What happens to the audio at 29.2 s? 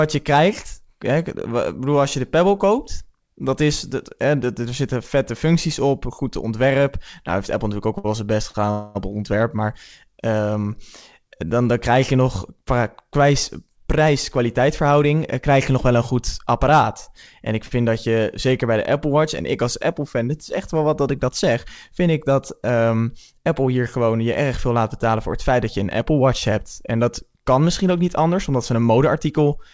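At 29.2 s the audio is inside a jitter buffer speed-up running from 28.74 to 29.57 s. The receiver trims short pitch-period chunks, about 70 ms in total, so the sound plays roughly 8% faster and hurried, yet its pitch stays unchanged, unlike a resampling error.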